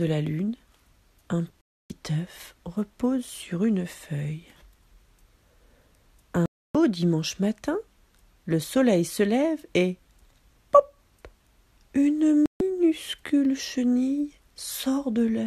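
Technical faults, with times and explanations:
1.61–1.90 s, 6.46–6.75 s and 12.46–12.61 s: digital broadcast dropout. The sound drops to silence three times. The first two gaps last about 0.29 s each and the third about 0.14 s. The receiver stopped getting usable frames and muted until valid ones arrived. The gap lengths fit whole frames of about 24 ms each. The audio resumes further along, so what was sent during each gap is lost.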